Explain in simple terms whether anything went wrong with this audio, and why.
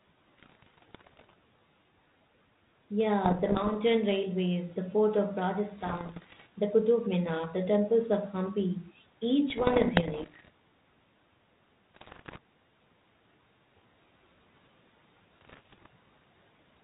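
Six short stretches of this speech sound damaged by bit errors on an ADPCM link: 0.37 to 1.34 s, 3.25 to 3.76 s, 5.78 to 6.47 s, 9.5 to 10.5 s, 11.94 to 12.39 s, and 15.41 to 15.86 s, with the one near 12 s the roughest. Flipped bits confuse the decoder's running guess of the signal, so each error becomes a pop followed by a brief rough, wobbly-level smear. The sound never drops out, which is how it differs from lost packets.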